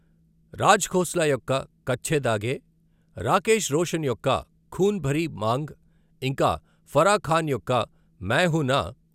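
Nothing in the recording calls for comment; it comes through without any technical trouble worth noting.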